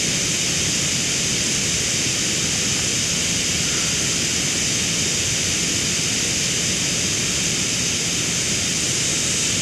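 No dropouts, clicks, distortion or other technical faults are audible anywhere in the speech.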